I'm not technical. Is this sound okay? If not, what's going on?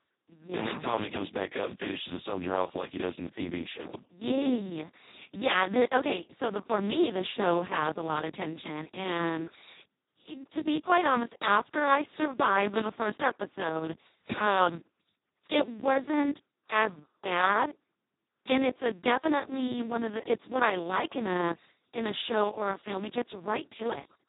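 No. From start to finish the speech sounds hoarse, buzzy and robotic, and muffled, with nothing above about 3.8 kHz. It was squeezed through the Speex codec, an old internet-call format, at its lowest quality, so too little detail survives.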